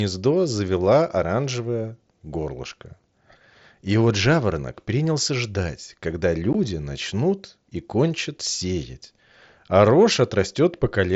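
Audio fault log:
6.53 s, unconcealed Bluetooth headset packet loss: there's a tiny hole in the speech, about 15 ms, consistent with a couple of dropped headset frames. Nothing was patched in, so the gap has hard edges, heard over the light grain of the mSBC link.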